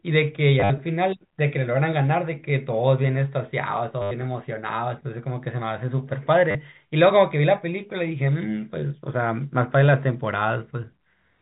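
Around 0.6 to 0.7 s, 4.02 to 4.11 s and 6.51 to 6.55 s you get packet loss with the last packet repeated. The receiver loops stale audio, buzzing near 100 Hz, which fits 10 ms packets, over the narrowband G.711 telephone sound.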